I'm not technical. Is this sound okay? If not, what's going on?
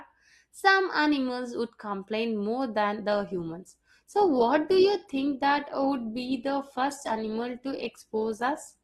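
No. At 3.11 s, after "would complain more than", an adaptive stream at a lower bitrate takes over. The sound suddenly turns rougher, with more compression artefacts, without any gap, until the end.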